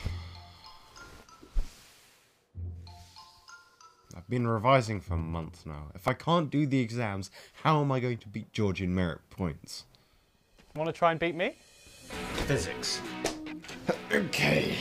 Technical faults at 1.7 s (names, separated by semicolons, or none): none